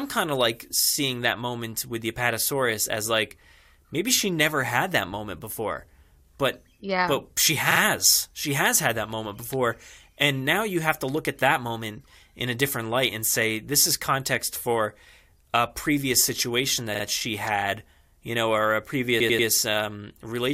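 Repeated frames stutter this speech clip at 7.70–7.79 s and 16.94–17.03 s, where a 46.4 ms block replays twice, and at 19.19–19.47 s, where a 92.9 ms block replays three times. These are compressed frames decoded again, lengthening the audio.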